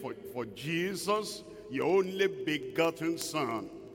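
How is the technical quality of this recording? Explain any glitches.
The recording has one clear fault: a steady stream of ticks. Word clock ticks run from 0.14 s to the end at 3.95 s, around fifty of them roughly every 70 ms. The receiving device's clock is not locked to the sender's and differs by a few hundred parts per million. Each time the two clocks slip past each other, a single sample is dropped or repeated, producing a sharp, regular tick of uneven strength over the sound.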